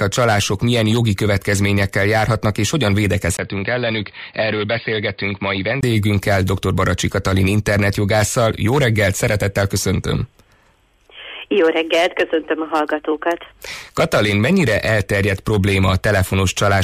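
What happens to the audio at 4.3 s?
An input switched to a poorer device from 3.37 to 5.83 s, likely a change of microphone. After a 20 ms gap, the sound turns dull, cuts off above 4.8 kHz, drops a few decibels, and gains a faint new noise floor.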